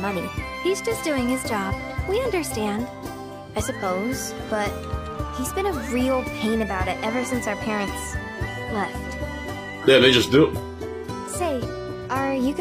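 At 8.50 s the sound switches abruptly to an adaptive stream at a lower bitrate, and it stays there to the end. There is no gap. Nothing remains above 14.9 kHz, and codec artefacts thicken. This fits a drop from 96 kbit/s AAC to 24 kbit/s HE-AAC.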